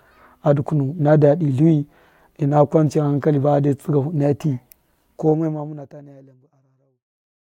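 Nothing stood out on listening to this speech clip, which ends with a smooth editor-style fade out beginning at roughly 5 seconds.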